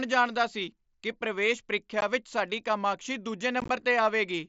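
At 2.01 s, between "ਜਾਣਦਾ ਸੀ ਕਿ ਪ੍ਰਵੇਸ਼" and "ਵਿਚ ਸਾਡੀ", the speech drops out for about 15 ms with hard edges. From 3.60 to 3.70 s, several brief gaps of up to 15 ms make it crackle and chop. This is unconcealed Bluetooth headset packet loss: voice packets on the mSBC link never arrived, and silence or an idle pattern took their place.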